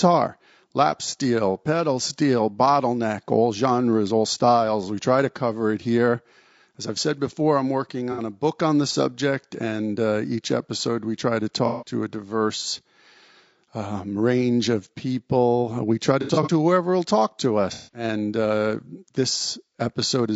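Throughout, the speech was likely encoded with low-delay AAC (AAC-ELD) at 32 kbps. Its short frames resolve pitch harmonics poorly, so the audio is plainly rough and grainy, with noise between the harmonics and a synthetic-sounding top band.

AAC frame loss with concealment follows, where the decoder rebuilds missing audio from the last good spectrum, leaving smeared, noisy patches. This happens for 60 ms at 8.12 s, and for 150 ms at 11.66 s between "episode we try to" and "a diverse". At 16.22 s, 120 ms of loss is scattered over 240 ms, with the longest run around 70 ms, before "to whoever will talk". The last is 210 ms at 17.72 s, after "whoever will talk to".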